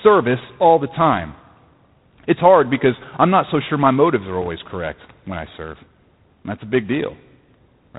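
From start to finish the speech carries G.726 ADPCM damage, plainly audible: a harsh, rasping hiss riding on the level of the speech, with nothing above 4 kHz. That coarse difference coding fits the 24 kbit/s mode, where fewer bits per sample push quantisation noise well up.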